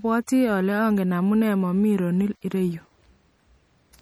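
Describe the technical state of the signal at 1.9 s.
At 1.9 s the signal carries MP3 compression damage, present across the whole clip rather than at this moment alone. The likely cause is an MP3 encode at a low bitrate, with the damage fitting roughly 48 kbps: short of bits, the encoder zeroes weak frequency lines, and they flicker on and off between frames. The speech therefore sounds plainly watery and swirly, with smeared onsets, and nothing remains above about 20.8 kHz.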